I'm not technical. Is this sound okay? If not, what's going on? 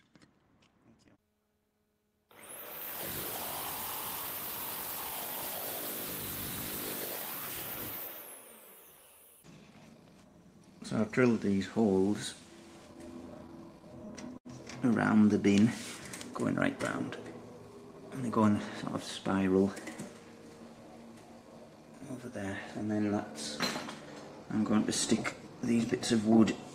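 No. From 12.93 to 14.47 s there are repeated stalls (stutter). The sound catches eleven times, for up to 76 ms each. Incoming audio arrived late, so the player briefly stretched the last bit of sound while waiting. Nothing is lost, but it drags.

From 18.23 to 18.51 s there is a jitter buffer speed-up. Too much audio had piled up waiting to play. To catch up, the player cut out tiny slivers, about 40 ms in all. The sound runs about 10% faster but keeps its pitch, so it feels briefly rushed.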